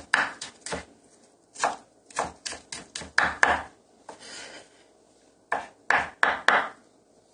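Throughout the recording, the sound was likely squeezed through AAC compression at a low bitrate, consistent with roughly 32 kbps AAC-LC. Starved of bits, the encoder trims the upper frequencies and quantises coarsely, leaving the audio plainly dull and smeared, with a fizzy, warbling texture.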